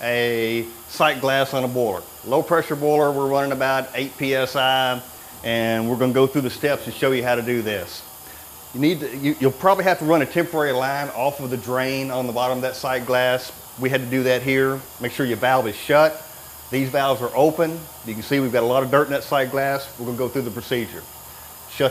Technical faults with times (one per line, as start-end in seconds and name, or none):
1.97 dropped buffer (overrun)
5.18 dropped buffer (overrun)
14.86 dropped buffer (overrun)